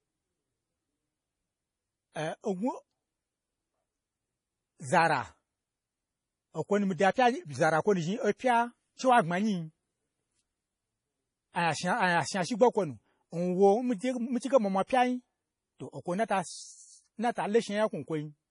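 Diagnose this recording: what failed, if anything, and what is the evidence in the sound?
Throughout, the speech sounds watery and swirly with nothing above 10.5 kHz, likely heavy MP3 compression in the codec stage, which fits a bitrate near 32 kbps.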